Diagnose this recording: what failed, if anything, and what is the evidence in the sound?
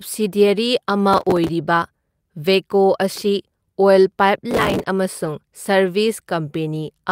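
Processor overload crackle at the driver and buffer stage, 1.13–1.49 s and 4.51–4.85 s. Buffers of around 5 ms miss their deadlines and replay stale audio, producing gritty tearing over the speech.

Lost packet rebuilt from error correction at the network and codec stage, 5.25–5.31 s. About 40 ms sounds rougher and noisier but has no gap, which fits two packets decoded from low-bitrate Opus FEC copies.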